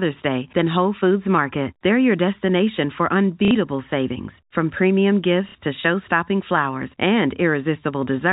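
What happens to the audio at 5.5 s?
Packet loss with last packet repeated occurs from 5.49 to 5.55 s. About 60 ms of audio is missing, which fits two lost 30 ms packets, and the last good packet is replayed to fill the gap. Its restarts seldom line up with the pitch, and the fill buzzes at about 33 Hz, a brief robotic stutter.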